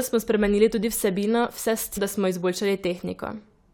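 At 1.96 s, damaged data in the compressed stream makes the decoder misread a frame and lose sync before recovering, producing a brief glitch in the speech.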